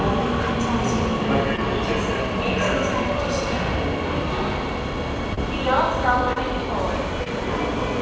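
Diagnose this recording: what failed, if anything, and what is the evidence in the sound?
Network stage: short concealed packet loss at 1.56–1.59, 5.34–5.39, 6.33–6.38 and 7.24–7.28 s, each heard as a brief smear or wobble. About 20 ms arrived too late each time. The decoder extended the preceding sound, then crossfaded back into the real audio.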